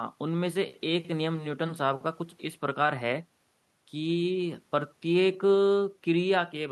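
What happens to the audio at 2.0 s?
Nothing goes wrong at 2.0 s; the speech plays through that moment intact, with no dropout, click or distortion.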